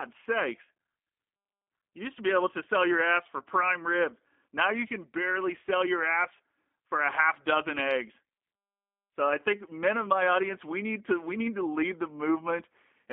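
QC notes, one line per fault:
throughout: G.729 codec, speech squeezed into roughly 250 Hz to 3.5 kHz at 8 kbit/s, sounding rough and synthetic because it is rebuilt from a vocal tract filter and sparse pulses.
3.38 to 3.44 s: VoIP packet loss concealed by the speech codec. About 20 ms is missing, consistent with a single lost packet. The decoder extends the previous sound as a fading buzzy tone or coloured noise, then the voice stays weak or distorted for tens of milliseconds as it recovers.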